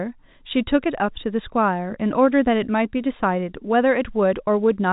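No technical faults can be heard in the speech, which bears the band limit of G.711 telephone coding, with nothing above 3.8 kHz and at most a faint quantisation noise that follows the level of the sound.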